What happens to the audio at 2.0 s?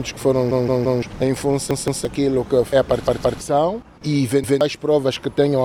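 At 2.0 s a repeated buffer stutters from 1.71 to 2.05 s. A 171 ms chunk, fitting an 8192-sample buffer, plays twice more with hard joins.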